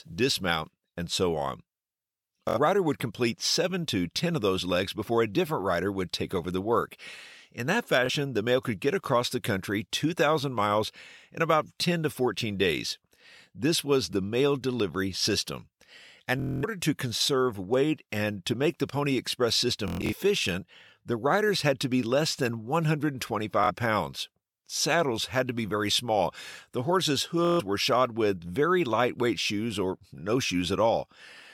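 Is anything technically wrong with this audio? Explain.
Yes, Bluetooth stutter affects this speech six times: 2.49 s (just before "rider would complete"), 8.06 s (before "the mail could get"), 16.4 s, 19.9 s, 23.6 s and 27.45 s (before "were shod with very"). When packets arrive late or not at all, the receiver keeps replaying its last slice of roughly 23 ms, which fits one packet per slice. Short gaps of 23 to 70 ms give a brief flutter. At 16.4 s, 230 ms of lost audio becomes a machine-gun buzz. At 19.9 s, 190 ms of losses are scattered over 230 ms, the longest run being 116 ms. At 27.45 s there is a 140 ms buzz. Each time, the speech resumes further along, as though it had kept playing.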